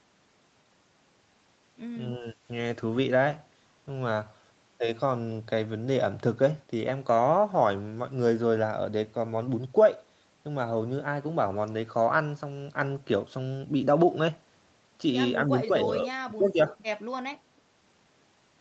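Speech, dropping out twice in a way that sounds like speech suppressed in double talk. From 2.18 to 2.4 s the talker sinks by about 20 dB for a brief moment. From 15.46 to 16.75 s there's a longer stretch where it dips by about 15 dB, on and off for well over half a second. The likely cause is the echo canceller treating simultaneous far-end talk as echo and ducking this side too. The call's microphone processing stops everything above 8 kHz.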